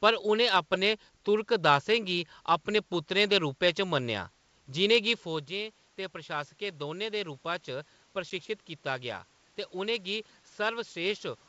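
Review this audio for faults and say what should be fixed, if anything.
Packet loss on an ADPCM call at 8.30 s: a 10 ms silent hole, a blank vertical stripe on the spectrogram, before "कीता गेआ" resumes mistracked while the decoder's predictor resynchronises. Add packet loss concealment and resynchronise the decoder state after lost packets to prevent it.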